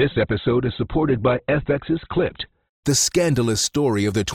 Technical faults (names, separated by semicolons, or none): adaptive stream starting at a low bitrate